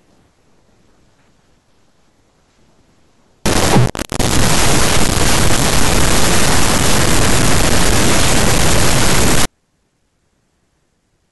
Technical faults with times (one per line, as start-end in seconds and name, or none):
3.45-9.45 stuck bit